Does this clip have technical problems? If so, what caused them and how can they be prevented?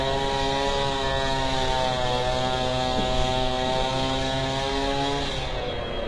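Yes: throughout, the treble sounds gritty and metallic and stops at about 11.5 kHz, likely from heavy HE-AAC compression rebuilding high bands from copied lower ones, consistent with roughly 12 kbps. Prevent it by encoding at a higher bitrate or with a codec that doesn't rely on band replication.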